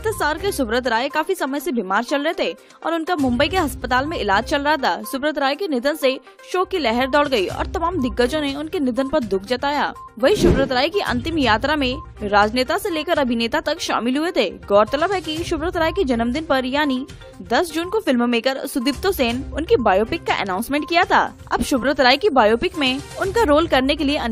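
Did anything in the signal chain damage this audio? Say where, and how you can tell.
No, nothing in the signal chain has audibly damaged this audio. Listening through, I can't point to any stage where the sound has been altered.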